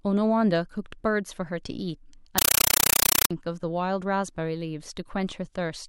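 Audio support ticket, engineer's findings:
Speech cut out 2.38 to 3.31 s, replaced by very loud chattering static. Compressed stream played as audio. Undecoded AC-3 data on the S/PDIF or HDMI link, taken as plain samples. 8 ms noise bursts then silent padding, repeating at 31.25 Hz. Density fits a 384 kbps stream. Probable component: receiver or sink passthrough/decode setting.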